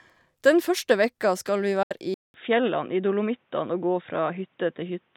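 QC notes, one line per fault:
1.83–1.91 s, Bluetooth dropout: The speech cuts to silence for about 75 ms. It then resumes further along, as if it had kept playing through the gap. The likely cause is packets failing to reach the headphones in time and being discarded, so nothing was played until valid data arrived. A gap this long fits roughly four lost packets.
2.14 s to end, input switched to a poorer device: After a silence of about 200 ms, the speech returns duller and boxier, with nothing above 3.8 kHz. The loudness stays about the same. A faint new background noise sits far below the speech. The likely cause is the recording moving mid-take to a different microphone or a headset call profile. That device passes a narrower band and brings its own tone and noise floor.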